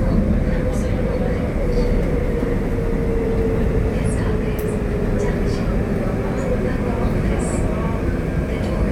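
At 2.23 s there's a short blip, and another at 4.67 s. Both come from damaged data in the compressed stream. A stretch of the encoded bytes got corrupted, so the decoder couldn't read those frames properly, lost its place and had to hunt for the next valid frame header before it could carry on. Each event is over in under 20 ms, so what you hear is a quick chirp, click or short hole cutting into the sound.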